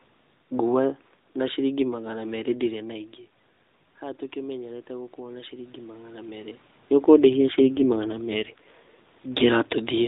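From 7.14 s to 9.06 s an AMR rate drop sets in. The mobile link has forced the codec down to a leaner mode, which fits a fall from 12.2 to about 5.9 kbps, and the speech turns buzzier and more synthetic before recovering. On a spectrogram the band stays capped at 4 kHz and the harmonic striations blur into coarser, smeared energy. The waveform shows no gap or level dip.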